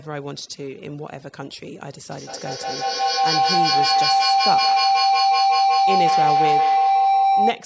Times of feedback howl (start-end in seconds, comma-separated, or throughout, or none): 2.10-7.66